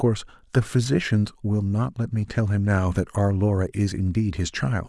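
No technical faults can be heard anywhere in the recording.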